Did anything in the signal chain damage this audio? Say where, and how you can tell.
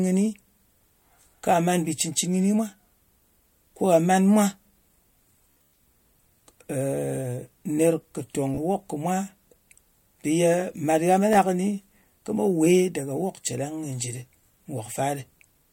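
Yes. Bluetooth stutter in the wireless link (the network/transport stage) damages the speech at three points. The worst, at 5.51 to 5.75 s, loses about 196 ms spread over 224 ms, with a longest unbroken run of 112 ms, and sounds like a rapid machine-gun buzz. Shorter hiccups follow at 8.55 to 8.59 s (28 ms) and 11.33 to 11.35 s (14 ms). The receiver repeats its last short slice while waiting for late or missing packets. The sizes fit packets of roughly 14 ms. On a spectrogram this shows as vertical striping with identical repeating columns. On the waveform it shows as a short cycle copied end to end, and the speech then jumps ahead as if it had continued.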